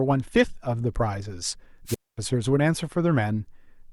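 At 1.86 s the speech is swallowed by a brief swell of hiss, then falls into a hole of near silence lasting about 0.23 s before it comes back at 2.18 s. This is a wireless microphone squelch dropout: the radio link from an analogue FM transmitter weakened, the receiver's noise rose as the carrier faded, and its squelch circuit then muted the output entirely until a usable signal returned.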